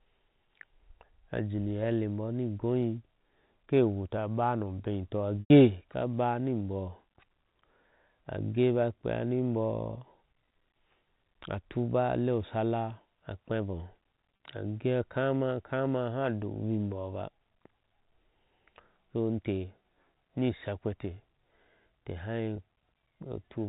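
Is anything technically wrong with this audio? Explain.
Yes, there are three spots of packet loss with pitch repetition. At 5.41 to 5.50 s, right after "no beitɔ" and before "ka baniboh", about 100 ms goes missing, which fits five 20 ms packets. There are shorter gaps at 14.36 to 14.40 s, just before "age akama kama aha", and at 22.56 to 22.58 s. In each one, the receiver keeps replaying the last pitch cycle to cover the hole, so you hear a brief held, buzzy tone. The longest one fades before the speech cross-fades back in.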